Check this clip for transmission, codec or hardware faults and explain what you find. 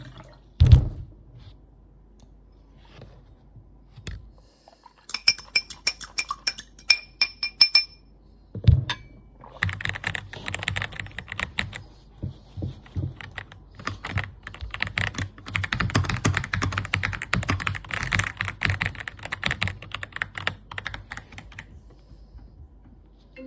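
Nothing found: no transmission, codec or hardware problem is audible anywhere in this recording of sounds.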